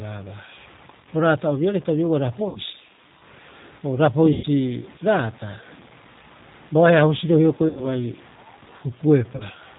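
From start to finish the speech carries a gritty, grainy distortion that rises and falls with the sound itself, sitting around 25 dB below the signal. Quiet syllables and word tails break up and sputter rather than sinking into a steady hiss. That tracking behaviour is what separates it from ordinary background noise, which would stay constant through pauses. The likely cause is low bit depth without dither, truncated to a resolution that fits about 7 bits, so the rounding error stays locked to the waveform.

Layered over this is the G.729 codec at 8 kbit/s. Everything above 4 kHz is gone, and the voice has a plainly audible rough, slightly synthetic edge, because the decoder rebuilds it from a vocal tract filter, a pitch predictor and a few pulses per frame. Unlike the bit-depth grit, this coloration does not depend on level. It shapes the timbre of loud and soft passages alike.

Four dropouts interrupt the speech, at 2.49 to 2.60 s, 4.33 to 4.46 s, 7.69 to 7.85 s, and 9.36 to 9.44 s, covering 60, 100, 80 and 40 ms of lost audio. 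This is VoIP packet loss concealed by the speech codec, and the amounts fit runs of 20 ms packets. Instead of silence or a click, each gap is filled with a stretched continuation of the last sound, a buzzy tone or a coloured noise that fades away. The voice stays weak and smeared briefly after each gap, which a simple cut would not do.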